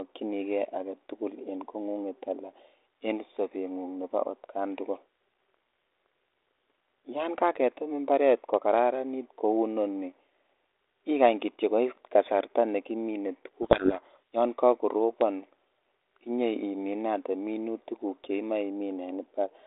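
From 13.62 to 14.18 s the speech is suddenly buried under harsh, grinding distortion and then comes back. This is a codec payload misread. The line sounds like G.726 ADPCM at a rate that fits 32 kbit/s, band-limited to roughly 250 Hz to 3.7 kHz. For that half second the decoder read each code word with its bits in the wrong order, so the difference values it rebuilt from were scrambled.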